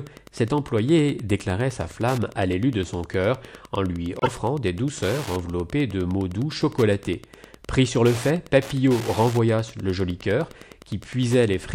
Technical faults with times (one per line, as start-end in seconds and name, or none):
0.00-11.75 Wi-Fi interference
4.19-4.29 corrupt frame decoded